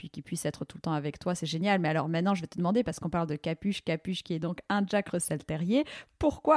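Nothing goes wrong anywhere in this speech recording, so there's no technical fault to point to at any moment.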